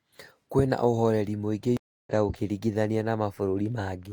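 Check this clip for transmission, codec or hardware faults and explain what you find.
At 1.77 s the speech drops out for about 0.3 s and resumes at 2.12 s, with roughly 0.3 s of material skipped. This is a stream reconnect: the connection broke, the player fell silent, then rejoined the live stream further on with a freshly started decoder.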